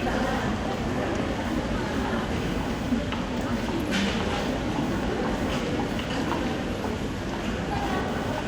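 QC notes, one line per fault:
Throughout, computer activity noise: a buzzing, chirping pulse near 500 Hz sits roughly 20 dB below the sound. Load changes in the processor, graphics card or mouse disturb the shared audio ground, so unlike steady mains hum it fluctuates with computer activity, not the sound.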